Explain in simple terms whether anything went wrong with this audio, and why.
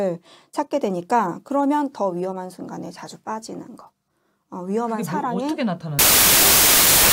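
Wrong sample width from 5.99 s to the end: data that fits 24-bit samples was read as 32-bit, so loud noise buries the sound, which plays 1.33 times too fast.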